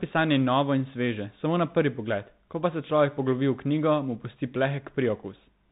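From start to finish the speech carries Bluetooth CVSD headset codec damage: a one-bit delta coder, fitting a 64 kbps link, tracks the waveform with an adapting step. Nothing above 4 kHz survives, s sounds turn scratchy, loud high content distorts, and granular hiss sits underneath.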